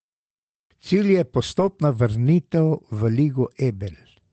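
Packet loss hit the call stream at about 1.59 to 1.65 s, just before "vrnitev v", and was covered by a lost packet rebuilt from error correction: the decoder filled the hole with the low-bitrate backup copy carried in the following packet, which fits two lost packets and about 40 ms of rebuilt audio. The result in this speech clip is no gap, but a brief stretch that sounds grainier and noisier, passing over a call path whose bandwidth tops out around 8 kHz.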